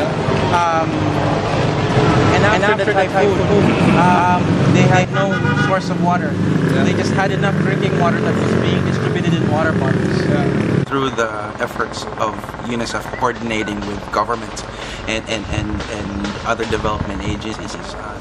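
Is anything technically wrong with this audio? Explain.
Yes, there are three kinds of fault.

MP3 compression runs through the whole clip, and the damage is plainly audible. A low bitrate, likely around 64 kbps, leaves the encoder short of bits. It trims the treble at a fixed ceiling and drops quieter spectral detail that flickers in and out frame by frame. The result is a watery, swirling texture with metallic chirps on bright hissy sounds and softened, smeared attacks.

A doubled audio track appears from 1.91 s to 5.05 s. A second copy of the sound, most likely from a slower capture path or a misaligned edit, trails the original by roughly a fifth of a second at about the same loudness. It carries no extra reverb or tone, so it reads as a dry, stuttering echo that appears and vanishes abruptly at those two times.

Frames out of order occur three times: 3.39 to 3.61 s, 13.06 to 13.22 s, and 17.53 to 17.75 s. 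In each, two adjacent blocks of frames were decoded in swapped order. The blocks are 104.5 ms long in the first and last cases, which points to four frames each, and 78.4 ms in the middle one. Each swap makes a brief garbled flutter, though no time is lost.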